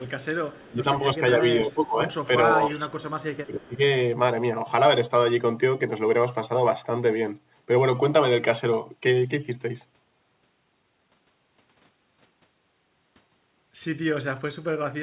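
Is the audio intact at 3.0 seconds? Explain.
No. From 2.68 to 3.45 s a faint, delayed copy of the speech trails it by about 0.31 s, far quieter than the direct sound. This is an echo leak, likely from a far-end loudspeaker whose echo canceller let some of its microphone pickup return.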